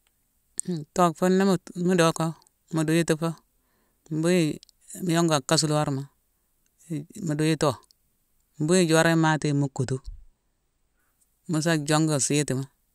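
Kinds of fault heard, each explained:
Channel delay (comb filtering): One channel arrives a tiny fraction of a millisecond late, roughly two samples, and the pair is summed to mono. Shared content cancels at evenly spaced frequencies. With so short a gap, the first notch sits high, near 10 kHz. From 9.15 to 10.99 s, after "mbuyi i joron" and before "mu sa", the speech loses its top-end air and sounds dull.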